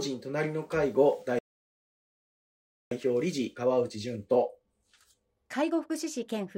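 Speech clip where the sound cuts out at 1.39 s and stays silent for about 1.5 s until 2.91 s, which is a playback stall, likely the player starving for data or its thread getting blocked. Right after, from 2.91 to 5.91 s, there's time-compressed catch-up: the player hurries through its backlog at about 1.15 times speed, pitch unchanged, by cutting out and cross-fading small pieces.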